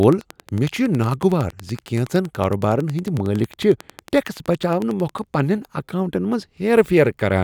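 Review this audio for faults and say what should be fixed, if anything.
A train of clicks runs from 0.03 s to 5.20 s, about 50 evenly spaced ticks at 10.9 per second. Each click has much the same sharp shape and peaks around 5 dB above the speech, so it pokes through the speech and sits in the pauses too. Such a steady, identical pulse points to something outside the sound itself, likely interference from nearby equipment or a faulty connection or power supply. To fix it, the affected stretch should be de-clicked or re-recorded, and future takes protected by keeping the interface and cabling away from switching electronics and making sure connections and power supplies are sound.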